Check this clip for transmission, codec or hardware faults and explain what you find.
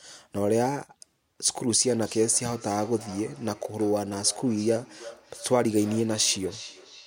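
There is one fault: a feedback echo between two devices, from 1.81 s to the end of the clip. Two devices in the same room are on the call. One plays back what the other's microphone sent, and that microphone picks it up again. Each device's echo canceller removes only its own playback, so this loop passes through. The speech returns at a steady interval of about 0.3 s, at its loudest about 19 dB below the direct sound.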